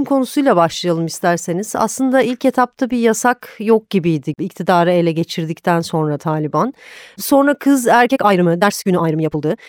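Speech runs at a natural pace until 8.03 s, then the last stretch to 9.68 s suddenly rushes along at about 1.79 times speed while the pitch stays put, so it sounds rushed. That's likely a time-stretched section, squeezed by dropping short slices of audio.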